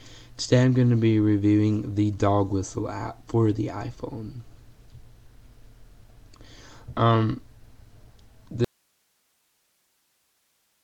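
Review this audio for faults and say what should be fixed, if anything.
An audio dropout to a faint residue starts abruptly at 8.65 s and lasts to the end. Only hiss remains, roughly 45 dB below the signal. The path likely stayed live after the source was lost. Secure and monitor source connections throughout recording.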